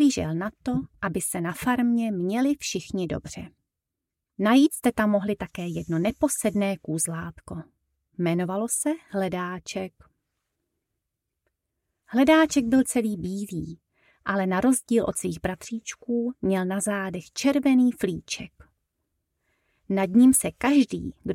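Nothing here stands out as a technical fault; the audio just runs along with no glitches or problems to point to.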